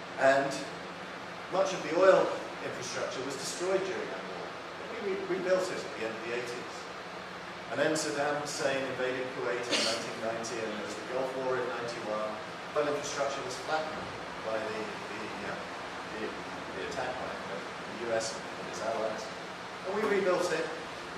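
Damaged data in the compressed stream makes the decoder misread frames, lose sync and hunt for the next frame header. The audio is marked by brief chirps or blips at 4.04, 7.73, 12.75, 15.49 and 18.37 s.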